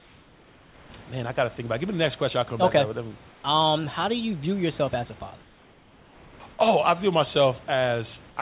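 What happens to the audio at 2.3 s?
Nothing goes wrong at 2.3 s: the speech passes through intact, with only the narrow, telephone-like band of the G.711 call path, which carries nothing above 4 kHz, and the faint room noise well below it.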